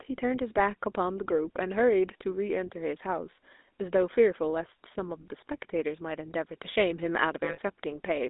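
From start to finish the speech carries the buzzy, gravelly roughness of the GSM full-rate codec, plainly audible and consistent with the 13 kbps full-rate coder. It models the vocal tract and excites it with a sparse, regularly spaced pulse train, so fine detail is lost and voicing turns harsh. On a spectrogram the energy sits in a band from about 250 Hz to 3.7 kHz, with empty space above and below and a smeared, grainy harmonic structure.

From 7.44 to 7.59 s, about 140 ms, there are lost GSM frames, a gap which fits seven 20 ms frames. The decoder filled it by repeating the settings of the last good frame, so the sound freezes into a rough, metallic ring. On a spectrogram this looks like a flat, horizontally smeared block with unchanging bands. On the waveform it shows as a repetitive stretch before normal signal resumes.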